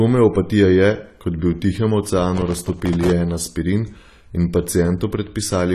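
From the start the speech sounds dull and smeared, with nothing above 14 kHz and a warbling, fizzy edge on sibilants. The likely cause is AAC compression at a low bitrate, which fits something near 32 kbps. Unlike a simple low-pass filter, it also smears texture inside the band.

From 2.38 to 3.11 s, processor overload crackle tears through the speech. Dozens of very short buffers, each around 1.5 ms, missed their deadlines and were left as silence, so the hard-edged gaps merge into a gritty burst. Unlike single dropouts or clipping, it clusters and then stops.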